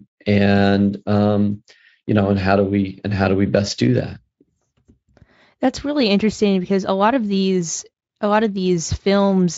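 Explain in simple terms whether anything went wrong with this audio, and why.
Nothing went wrong; no faults can be heard here.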